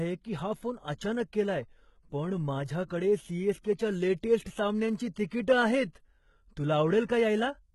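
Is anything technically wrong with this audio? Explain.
Yes. Throughout the speech the treble is present, but s sounds come out gritty and lispy with a metallic edge, and the upper harmonics do not sit in line with the lower ones. The likely cause is heavy HE-AAC compression at a very low rate, fitting roughly 16 kbps. Only the lower band is truly coded, and the top is rebuilt by copying lower bands upward under a coarse envelope. Unlike a plain low-pass, the highs are not missing. They are synthetic, which explains the false sibilance.

Pre-echo appears four times: at 2.87 to 2.90 s (spreading about 34 ms), 5.14 to 5.16 s (22 ms), 5.29 to 5.31 s (22 ms), and 7.06 to 7.09 s (25 ms). At each, a sharp attack lands late in a transform block. The quantisation noise sized for that loud onset smears across the whole block, including the quiet moment just before it. You hear a brief hiss leading into the attack, which then sounds softened. 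Because the noise comes before the onset rather than after, it differs from reverb tails or ringing.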